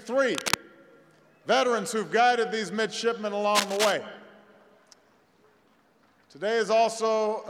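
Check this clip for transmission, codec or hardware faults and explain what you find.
Two bursts of cable scratch noise, from 0.32 to 0.57 s and 3.55 to 3.92 s: rough scratching nearly as loud as the sound, likely from a worn connector whose contact resistance flickered when moved.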